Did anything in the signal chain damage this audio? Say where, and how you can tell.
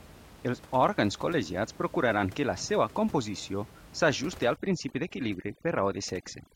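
Yes. From 4.56 s to the end, overdone noise removal in call processing mutes any band near its noise estimate. The background drops and breaks up into twinkling specks. A spectrogram shows scattered isolated dots and holes in the harmonics.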